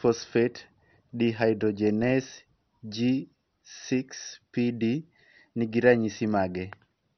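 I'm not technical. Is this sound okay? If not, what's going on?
No. Throughout the speech, the sound is dull and muffled, with nothing above 6.2 kHz, and it has a gurgling, grainy roughness. This is likely MP2 compression squeezed too hard: to save space it switches off the upper bands and describes the rest only coarsely.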